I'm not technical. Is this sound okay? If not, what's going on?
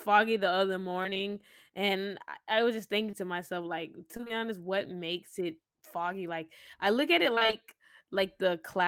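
No, there are a few rough spots. Between 1.03 and 1.29 s (after "the other"), 4.17 to 4.40 s (after "thinking to myself like"), and 7.35 to 7.55 s, you get repeated packet loss (robotic sound): four or five tiny chunks of the call go missing in quick succession, each about 20 ms. The receiver patches each hole by stretching the last bit of sound, so nearly half of each stretch is filler, and it comes out choppy and robotic.

Around 3.11 to 3.15 s, right after "I was just thinking", there's one short concealed packet loss: about 20 ms never arrived, and the receiver smoothed over it by continuing the previous sound. You'd hear just a quick smear or tiny wobble before "to myself like".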